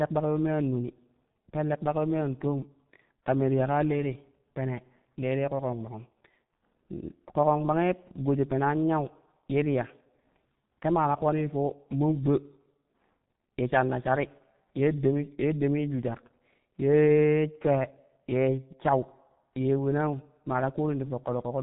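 G.723.1 codec damage runs throughout: nothing passes above 3.8 kHz and the slow-updating low-bitrate voice model, consistent with roughly 6 kbit/s, leaves the speech muffled, hoarse and blurred.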